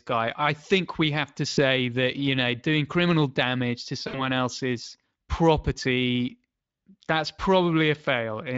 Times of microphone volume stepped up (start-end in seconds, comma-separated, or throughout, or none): none